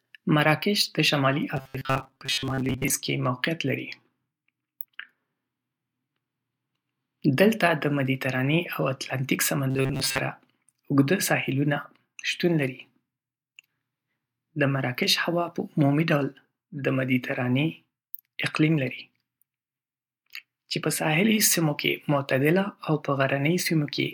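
Speech, with two patches of robotic sound from repeated short buffers: 1.57 to 2.95 s, right after "مراکش د شمالي", and again from 9.71 to 10.2 s. In both, the voice collapses into a stiff metallic buzz pinned at 133 Hz, which points to a chunk of roughly 7.5 ms being looped. Most of the audio in those stretches is replays rather than new material, likely because audio was reaching the playback side too slowly.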